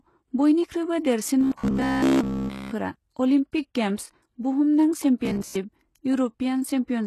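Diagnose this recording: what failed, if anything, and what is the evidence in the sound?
Codec stage: HE-AAC compression is the likely cause of heavy damage throughout. The treble sounds gritty and rebuilt, and a spectrogram shows copied-looking upper bands with nothing above 12.3 kHz.

Driver or buffer stage: robotic sound from repeated short buffers, from 1.41 to 2.72 s (just after "बयनिख्रुयबो देरसिन") and from 5.25 to 5.55 s. Each span carries a rigid 66.7 Hz buzz. That rate fits a 15 ms segment being replayed in place of new audio, which is likely how it arose. Nearly all of the first span is repeated, and roughly 70 % of the second. The waveform shows identical repeating cycles.

Codec stage: pre-echo at 3.52 s. Quantisation noise spreads about 13 ms ahead of a sharp attack, softening it. The waveform shows a short hiss just before the transient.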